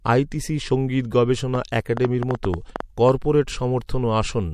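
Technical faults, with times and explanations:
1.55–3.10 s: train of clicks, about ten sharp pops at an uneven pace averaging 6.5 per second and peaking roughly 10 dB above the speech. Interference from nearby equipment is the likely source. On a spectrogram these appear as thin vertical broadband lines, and on the waveform as isolated spikes.
3.87–3.89 s: pre-echo, a 20 ms hiss rising about 20 dB just before an attack, which sounds softened. A 36 ms transform block without short-block switching spread its quantisation noise ahead of the onset. A spectrogram shows a noise smear leading the transient.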